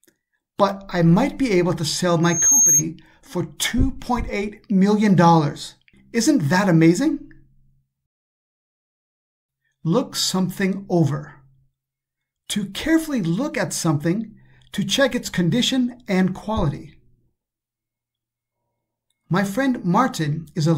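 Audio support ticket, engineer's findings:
Piercing single tone at 6.5 kHz, 2.23–2.85 s. Swells over roughly a third of a second to about 5 dB above the programme, then cuts off. Loudspeaker feedback squeal. Probable component: mic picking up the speaker it feeds. Loop gain above unity at 6.5 kHz, so the tone reinforces itself each pass until the loop is broken.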